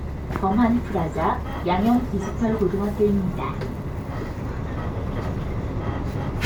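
No technical faults can be heard in this recording of everyday sounds.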